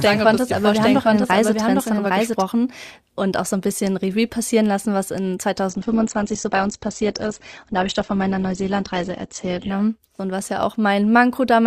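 From the first moment until 2.42 s, the audio plays as a doubled audio track. A second full-band copy trails the original by roughly 0.7 s. It sits about 5 dB lower. It carries no decay and no room colour, so it sounds like a clean repeat, not an echo. It is already running when the clip opens. It stops abruptly at 2.42 s. The likely cause is a second, slower capture path or an edit holding two copies out of step.

At 5.70 s the quality drops suddenly, with no gap. This is an adaptive stream at a lower bitrate. The connection slowed, and the player switched to a leaner version. Nothing is left above 8.2 kHz, so the treble goes dull. Codec artefacts thicken. The sound points to a move from Opus at about 64 kbit/s down to about 12 kbit/s. Full quality returns just as abruptly at 9.70 s.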